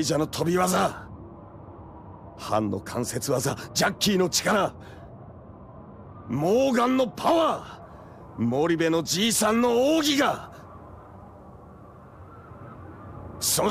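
From 7.82 s to the end of the clip, a video or display buzz sits under the sound. A screen or video cable is coupling its interference into the audio path, leaving a rasping hum at the 59.94 Hz field rate with gritty hash above it, plus a thin, piercing tone at the 15.7 kHz line rate. The intrusion stays well below the programme, roughly 30 dB down.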